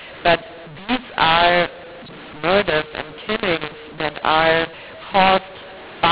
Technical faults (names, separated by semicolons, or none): mu-law and A-law mixed up